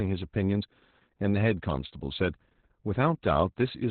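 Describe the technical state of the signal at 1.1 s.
At 1.1 s you're hearing Opus voice compression, and it runs through the whole clip. Nothing gets above about 4.4 kHz, which points to narrowband SILK at roughly 8 kbps. The coarse excitation coding leaves the speech muffled, hoarse and a bit robotic.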